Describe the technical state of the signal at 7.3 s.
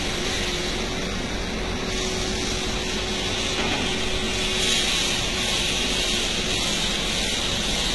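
At 7.3 s you're hearing the same thing that runs through the whole clip: HE-AAC compression, likely at a very low rate, somewhere around 16 kbps. Only the lower band is really coded. The treble is synthesised by copying lower content upward and shaping it with a coarse envelope, so the top end sounds gritty and metallic, with harmonics that don't line up. Damage is heavy, and there's nothing at all above about 11.8 kHz.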